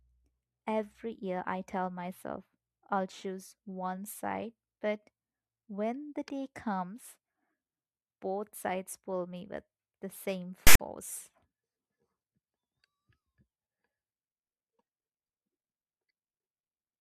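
At 10.67 s the speech is broken by about 0.13 s of file tags played as audio: text bytes read as samples give a harsh, lopsided rasp, then zero padding drops to dead silence. The abrupt hard edges and offset buzz set it apart from a dropout.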